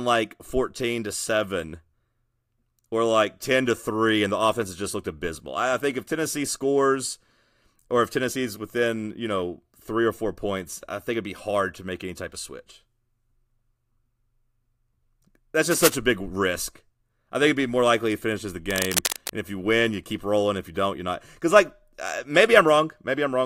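Cable scratch noise at 15.71 to 15.97 s and 18.70 to 19.33 s: dense, uneven rustling bursts sitting only a little below the speech, likely from a worn cable or connector being moved.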